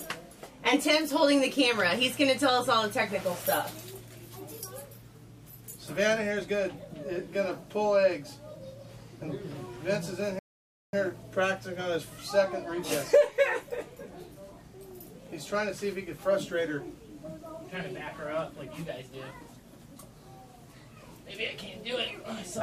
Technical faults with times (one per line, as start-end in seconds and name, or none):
10.39-10.93 playback stall